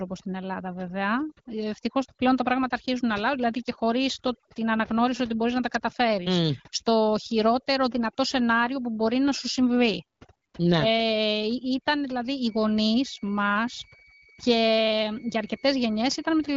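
Throughout the speech the background drops and breaks up into twinkling specks: overdone noise removal, which cuts quiet voice detail along with the noise.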